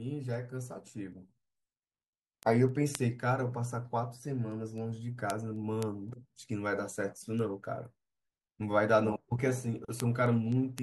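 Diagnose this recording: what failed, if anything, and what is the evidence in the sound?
A receiving converter ran on its own clock, unlocked from the digital link, causing word clock ticks: sharp, uneven ticks about every third of a second from 0.34 to 10.78 s, each a single sample slipped.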